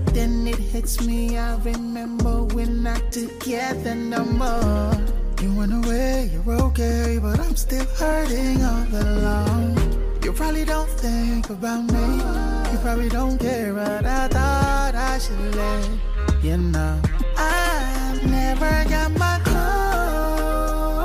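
No technical faults are audible anywhere in the recording.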